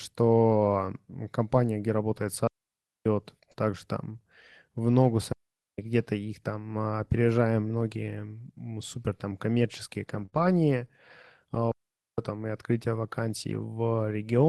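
At 2.47 to 3.06 s, 5.32 to 5.78 s (right after "также там в ногу") and 11.72 to 12.18 s, a digital wireless dropout mutes the receiver: clean holes of about 0.58 s and 0.46 s, with no noise burst, unlike a concealed packet loss.

At 7.65 s, 8.77 to 8.83 s (just before "супер там коммерческие"), 10.13 to 10.23 s and 10.34 to 10.48 s, each lost packet is rebuilt from error correction. Low-bitrate copies fill the gap, so nothing drops out, but the sound turns briefly rougher and noisier.

Between those last two stretches, from 10.25 to 10.34 s after "супер там коммерческие", two back-to-back short concealed packet losses of 20 ms each are filled by continuing the previous sound. This gives a smear or wobble rather than roughness or silence. The Opus call path's 12 kHz upper limit stays constant throughout.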